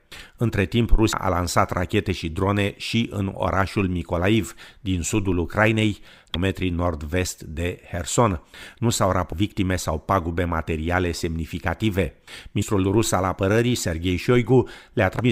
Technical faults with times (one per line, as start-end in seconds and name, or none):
1.12 damaged data in a compressed stream
6.34 damaged data in a compressed stream
9.31 damaged data in a compressed stream
12.61 damaged data in a compressed stream
15.19-15.21 damaged data in a compressed stream